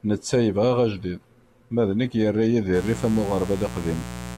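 Speech, with a mains buzz entering at 2.72 s and running to the end at 4.38 s: a steady, raspy buzz well up in level, roughly a third as loud as the speech, built on 60 Hz. Switching spikes leaking from a dimmer, rectifier or unshielded cable produce it. A spectrogram would show evenly spaced horizontal lines at 60 Hz multiples climbing into the kilohertz range, and the waveform a regular spiky pattern at 120 Hz.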